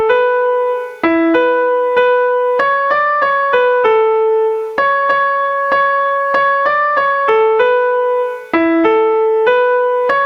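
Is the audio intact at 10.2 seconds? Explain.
No. Gain pumping runs through the whole clip, so it is present at 10.2 seconds as well. The level heaves up and down by around 15 dB, ducking sharply under each loud moment. The likely cause is input gain set far too high, with a fast limiter or compressor clamping down on every peak, which squashes loud and soft passages toward the same level.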